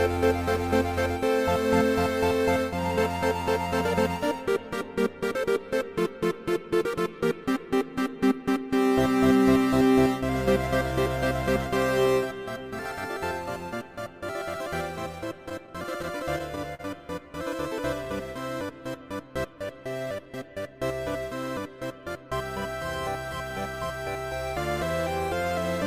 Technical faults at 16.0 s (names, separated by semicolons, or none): repeated stalls (stutter)